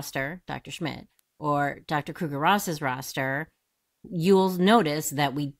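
At 1.19 s a single sharp snap cuts across the speech, a tiny spike lasting only a couple of milliseconds and peaking at about -30 dBFS. It sits on top of the voice without disturbing it. This is an electrical switching spike, most likely from a nearby switch, relay or static discharge arcing briefly and coupling into the audio line.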